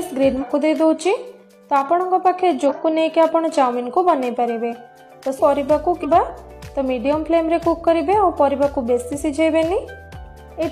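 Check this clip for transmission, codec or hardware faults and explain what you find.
Damaged data in a compressed stream causes four short disruptions: 0.38 to 0.44 s, 2.65 to 2.72 s, 5.34 to 5.39 s and 5.99 to 6.06 s, each 48 to 68 ms long. At each point, corrupted bytes make the decoder misread or reject frames and hunt for the next valid header, leaving a brief chirp, squawk, click or hole. On a spectrogram, each shows as a narrow vertical band of broadband smear or a blank strip; the waveform shows a matching abrupt break.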